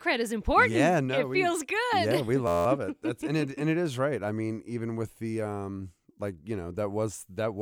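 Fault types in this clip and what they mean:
System hang loop: a freeze left the hardware replaying one 11.61 ms slice 16 times from 2.47 to 2.66 s, which fits a 512-sample buffer. So short a loop makes a steady 86.1 Hz buzz. Its exact repeats never fade, unlike an echo or a dropout.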